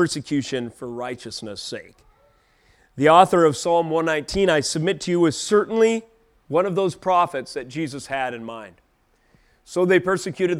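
No technical faults occur anywhere in the speech.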